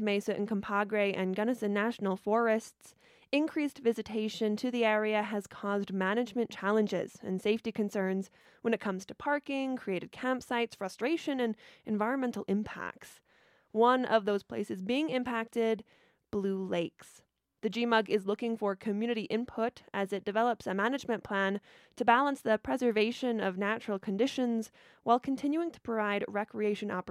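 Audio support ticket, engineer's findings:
Corrupt frame concealed, 8.42–8.45 s, after "challenges and safety concerns", before "when it comes to". AAC decoder detected bit errors and masked them; the 32 ms length fits a single damaged frame.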